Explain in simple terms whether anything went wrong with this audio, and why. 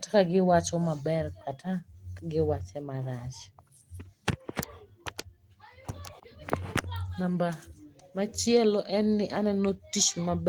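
Nothing went wrong with this audio, because no technical fault can be heard anywhere in it.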